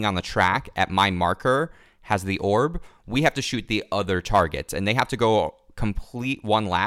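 Hard clipping hits the speech peaks at 0.4 to 1.05 s (about 4 dB over), 2.12 s and 4.35 to 4.41 s (about 3 dB), and 4.91 to 5.23 s (about 5 dB). The signal exceeds what a stage can pass, so its tops are flattened, adding high harmonics heard as harsh crackle.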